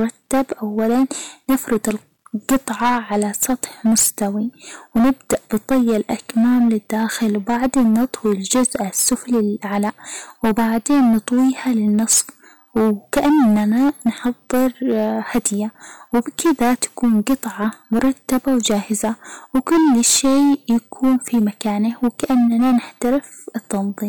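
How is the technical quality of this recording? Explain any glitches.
The recording is heavily overdriven for its whole length, so the quality is poor. Hard clipping runs throughout: pushed about 16 dB past what the chain can pass, about a tenth of the samples hit the ceiling and are sliced flat. Those squared-off peaks spray harmonics high into the spectrum, giving a harsh, buzzy fuzz on every loud syllable. The abrupt, gritty edge sets it apart from the rounder, warmer thickening of soft saturation.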